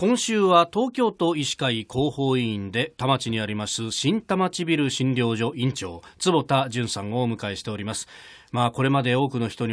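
No technical faults can be heard anywhere in this recording.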